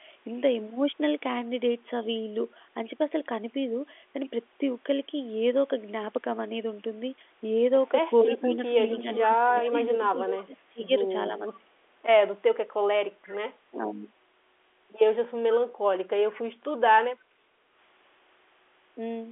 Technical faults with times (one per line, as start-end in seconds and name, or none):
8.23-11.72 speech suppressed in double talk
8.35-10.44 echo leak
13.25-13.29 echo leak
13.71-14.07 speech suppressed in double talk
16.34-16.71 echo leak
17.22-17.75 background gated by the echo canceller